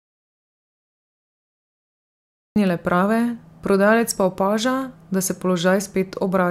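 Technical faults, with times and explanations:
0.00–2.56 s, audio dropout to silence: the clip opens in dead silence without room tone, with speech resuming at "prave prodajalec pa opaža", likely from lost input recorded as silence.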